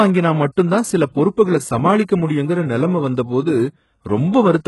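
Speech runs through its whole length with heavy codec damage, likely from HE-AAC compression at a very low rate, consistent with about 12 kbps. The treble is rebuilt from copied lower bands rather than coded, so sibilants sound gritty and metallic, and harmonics fail to align across the crossover. On a spectrogram the upper region looks smeared and blocky, repeating patterns from below, with nothing above 11.5 kHz.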